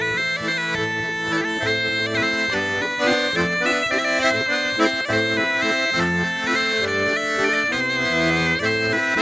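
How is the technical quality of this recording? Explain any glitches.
No glitches can be heard: the audio has passed through a call's microphone processing, which leaves nothing above 8 kHz and trims the lowest bass as expected, and the signal shows no dropouts, clicks, distortion or other faults.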